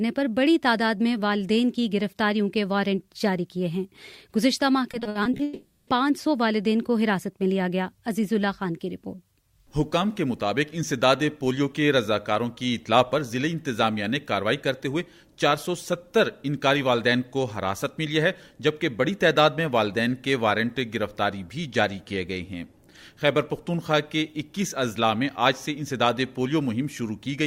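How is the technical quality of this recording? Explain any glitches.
The recording has two connected glitches close together, both from an unreliable network path, between about 4.91 and 5.89 s.

From 4.91 to 5.41 s there is repeated packet loss with a robotic sound. Seven short gaps, the longest 60 ms, were each patched by extending the preceding audio, so concealment covers about 180 ms, roughly 36% of that half-second. Because the holes come in quick succession, the repeated fills give the sound a choppy texture, with fragments of the original missing.

Right after, from 5.43 to 5.89 s, the audio is replaced by a sustained artificial continuation of the last sound for about 440 ms. It never drops to silence. The original content from that span does not return. When the audio resumes, it picks up later, with that stretch gone. This is likely a long network dropout, where nothing arrived and the receiver kept synthesising a continuation until packets flowed again.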